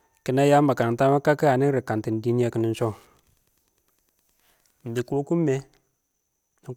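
From 2.63 s to 4.89 s, a nearby Wi-Fi radio couples into the audio circuit, which rectifies its beacon transmissions, repeating every 102.4 ms, into the signal: Wi-Fi interference. The result is a steady, evenly spaced ticking at close to ten clicks per second, sitting faintly under the speech at roughly 45 dB below it. It runs for a little over two seconds and stops just before "dɪ kokin mɪ".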